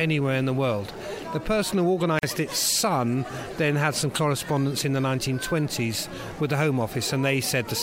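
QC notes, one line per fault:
2.19–2.23 s, gap at a join of encoded pieces: continuous sound breaks into a silence of about 43 ms, then carries on from exactly where it stopped. The encoder's start-up delay and last-frame padding were left in when two separately encoded pieces were butted together. The edges are smeared by the codec. The join spacing fits pieces about 6 s long. Unlike a dropout, nothing is missing; the gap is added time.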